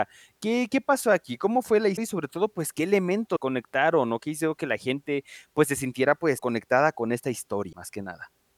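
Speech clip with four brief glitches, each roughly one MP3 frame long, about 24 ms: at 1.96 to 1.98 s, at 3.35 to 3.37 s just before "conectaron o qué hicieron", at 6.37 to 6.40 s between "gente pues se sintiera" and "conectada con", and at 7.72 s right after "conectada con". The likely cause is a broken MP3 bit reservoir. Frames went missing, so the next frame reached back for borrowed data, decoded the wrong bytes, and the sound skipped ahead.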